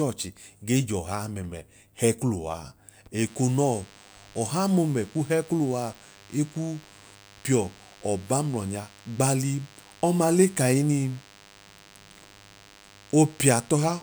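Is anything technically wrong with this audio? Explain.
Yes. A DECT cordless phone buzz starts at 3.27 s and continues to the end of the clip. A nearby DECT handset or base transmits a brief radio burst every 10 ms, and the audio circuitry rectifies those bursts into a signal at 100 Hz. The result is a steady, thin buzz rich in harmonics, sitting around 30 dB below the speech and audible beneath it throughout.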